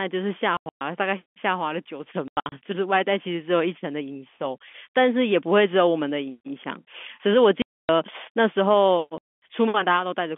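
Packet loss filled with silence cuts holes at 0.57, 2.28, 7.62 and 9.18 s. Missing packets played as silence. Gap sizes fit 30 ms packets.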